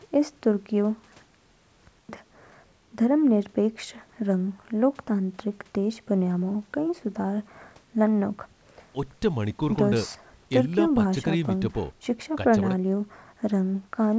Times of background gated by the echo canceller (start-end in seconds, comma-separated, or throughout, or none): none